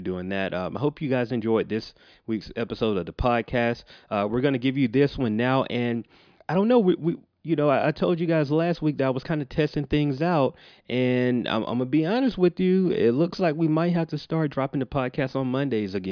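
Nothing in the recording stood out as a technical fault on listening.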